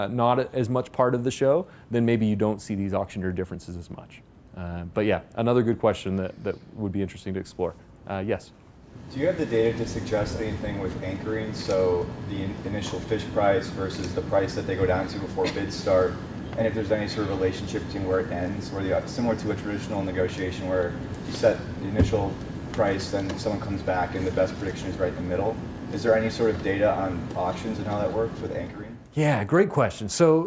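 Nothing in the audio stood out as a technical problem on listening.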